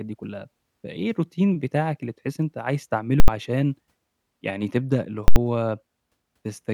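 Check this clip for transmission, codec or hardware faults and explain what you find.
Two faults interrupt this speech clip, both of the same kind: invalid numbers at full scale, at 3.20 to 3.28 s and again at 5.28 to 5.36 s. In each case a calculation produced infinite or invalid values, which were clamped to the largest positive or negative sample. The output sat flat at one extreme value, far beyond the speech peaks, for each 80 ms block. Because each block is so short, the result is a single very loud bang each time.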